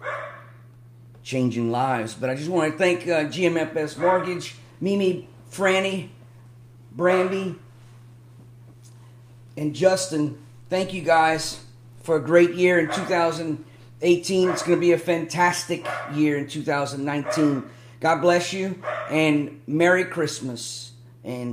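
No technical faults can be heard anywhere in the clip. Nothing in the audio calls for a timestamp or a note of any problem.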